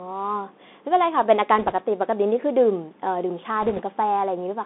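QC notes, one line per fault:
Throughout: Bluetooth CVSD headset codec. The speech sits in a narrow telephone-like band from about 250 Hz to 3.6 kHz, with the lows thinned and nothing bright on top. The codec damage is plainly audible. A one-bit delta coder can only step its level up or down each sample, so fast loud rises in the speech overrun the step and smear, sibilants turn scratchy, and a fine granular hiss rides underneath. All of this fits a 64 kbps CVSD stream.
1.59–1.73 s and 3.62–3.82 s: bit errors on a Bluetooth voice link. Two short bursts of rushing, crackly noise lie over the speech. The second, at roughly one and a half percent of bits flipped, is grittier than the first, at around one percent. Because each CVSD bit only nudges the level by one step and the error fades out, the damage is a noisy wash rather than sharp clicks.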